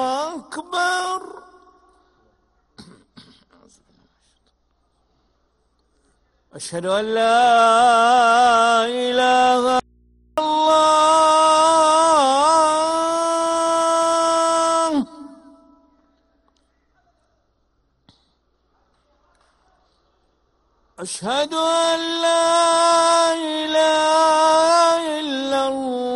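At 9.80 s an audio dropout to a faint residue abruptly cuts the sound for 0.58 s, until 10.38 s. Only mains hum, roughly 40 dB down, remains, likely from an open input; the waveform collapses to a band, the spectrogram to narrow hum lines.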